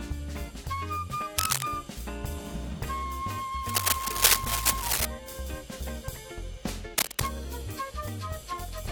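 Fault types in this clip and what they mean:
cable scratch noise: a worn cable or connector was likely disturbed, its contact resistance flickering, which laid three bursts of rough scratching about 5 dB louder than the music.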